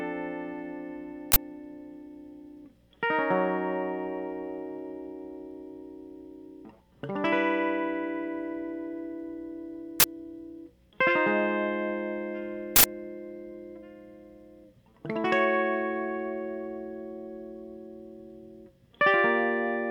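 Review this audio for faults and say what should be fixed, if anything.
The music is broken by three uninitialised buffer bursts. They run from 1.32 to 1.36 s, 10.00 to 10.04 s, and 12.76 to 12.84 s. The first two last 40 ms and the third 80 ms. Each is a sudden, loud crack or burst of digital noise. The player sent blocks out before any audio was written to them, so stale memory came out as samples. To fix it, clear every buffer to silence and only play blocks once they are filled.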